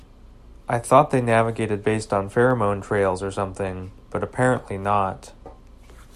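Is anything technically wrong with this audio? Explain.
Yes. From 0.11 s to 6.14 s the speech carries clock slip clicks, a faint, even ticking roughly every 40 ms that blurs into a soft rattle. The likely cause is two devices running on unsynchronised clocks, differing by something like 500 ppm, so a single sample is dropped or repeated each time the drift builds to one sample. On a waveform each slip is a tiny discontinuity; a spectrogram shows evenly spaced thin vertical lines, strongest under loud speech.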